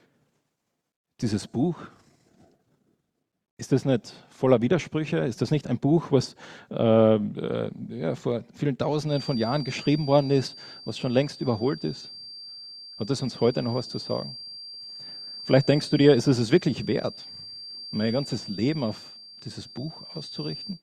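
From 9.03 s until the end of the audio, a feedback whistle sits behind the sound: a thin, steady tone at 4.7 kHz, roughly 20 dB below the main signal, swelling and fading slowly in level. The likely cause is a loudspeaker-to-microphone loop held just at the edge of instability, where gain at that one frequency is high enough to sustain the tone but not high enough to build into a runaway howl.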